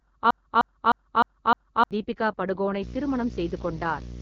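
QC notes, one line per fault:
Throughout: AMR wideband (HD Voice) codec. The speech has a plainly audible rough, raspy texture, and there is no content above 7.2 kHz. The codec models the vocal tract and drives it with pulses up to 6.4 kHz, then fills the top band with shaped noise. With this little data the pulse coding is too coarse to track the voice cleanly, which fits the 8.85 kbit/s mode, one of the two lowest rates.
0.00 to 1.91 s: broken-record loop. A 306 ms fragment is already repeating when the clip opens, and it plays back to back five times with identical content on each pass. The speech that belonged in this span never arrives. This is likely a stall somewhere in the player, encoder or stream that left it re-sending the last buffer it held until fresh data resumed.
2.82 to 4.22 s: video or display buzz. A 60 Hz buzz with hashy harmonics above it sits roughly 10 dB under the speech and runs to the end of the clip. 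The 60 Hz fundamental matches a display field rate. This points to a screen or video cable coupling its scanning current into the audio wiring or input stage. The harmonic content comes from the sharp, non-sinusoidal shape of that interference.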